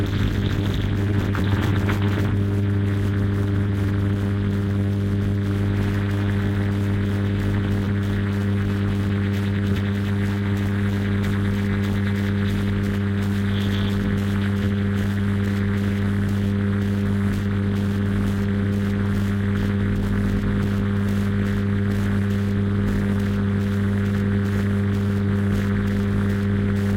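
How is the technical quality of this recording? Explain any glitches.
The recording has timing faults from start to end, caused by the two ends of the link running on mismatched clocks.

Throughout the clip there is clock drift between sender and receiver. The sender's audio clock runs roughly 4% slow relative to the receiver's, so the receiver's jitter buffer keeps draining and the playback side must make up the shortfall to stay in step.

From 0.62 s to 26.75 s there are repeated timing corrections. The receiver repeatedly inserts short repeated fragments, all stretching the audio, so the sound plays at 96% speed and gains about a second overall. These edits are unevenly spaced and at most come across as small hiccups and an unsteady tempo.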